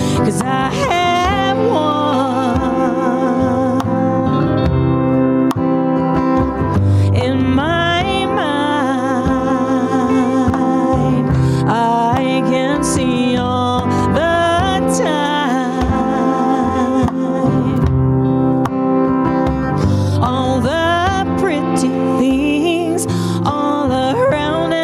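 Gain pumping runs throughout: loud and soft parts sit closer in level and the sound is squashed, a swing of roughly 15 dB, likely from excessive gain driving a fast limiter.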